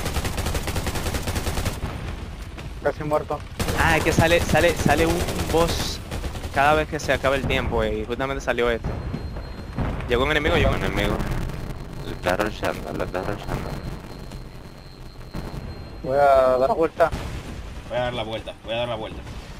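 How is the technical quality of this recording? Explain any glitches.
The recording has audible faults: a stretch of slowed, buzzing audio and four isolated clicks.

From 10.72 to 15.62 s there is a block size mismatch (padded). Each read block is only partly filled, and the remainder is zero-padded. This produces a 93.8 Hz buzz and playback at 0.625 speed, which fits a 512-sample read block. Unlike resampling slowdown, the pitch stays about normal.

Single sharp clicks occur at 10.12, 15.9, 17.01 and 18.33 s. These are likely dropped samples, where a tiny fraction of a millisecond is skipped and the waveform jumps. Each click is isolated and nothing audible goes missing, which distinguishes them from dropouts or gaps.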